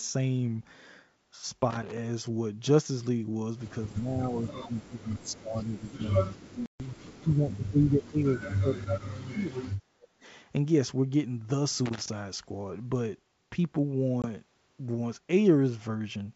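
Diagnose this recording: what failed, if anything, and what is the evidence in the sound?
Loose connector crackle at 1.71–1.97 s and 11.86–12.09 s, in the analogue wiring. Each burst is an irregular scratch lasting roughly a quarter second. A worn or dirty contact is opening and closing as it moves, chopping the signal and popping wherever DC sits on the line.

Speech suppressed in double talk, from 3.82 to 6.12 s and from 6.28 to 10.14 s. The speech sinks by up to about 25 dB in the first stretch and about 35 dB in the second. The likely cause is the call's echo canceller failing to separate the near talker from loudspeaker echo while both sides spoke, and attenuating everything.

Packet loss on an ADPCM call at 6.66–6.88 s and 14.22–14.26 s, in the network. The holes are hard-edged silences, 140 ms and then 20 ms, which fits several 20 ms packets and then a single one. The G.722 decoder's predictor and step size then lag the sender's, so speech returns slightly distorted before settling.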